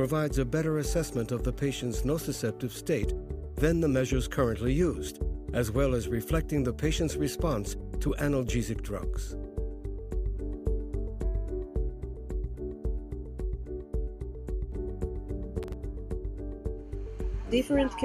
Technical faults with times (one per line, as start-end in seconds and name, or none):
15.63-15.73 processor overload crackle